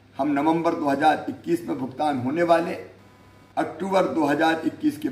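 From 2.52 s to 4.52 s, a faint buzzing chirp sits under the sound. This is computer activity noise. Changing load in the processor, graphics card or mouse shifts the ground shared with the audio circuit. That disturbance leaks into the signal. Here it pulses at a few hundred times per second, giving a raspy, insect-like tone. It stays far below the main sound, around 35 dB down. It follows the machine's workload, not the audio itself.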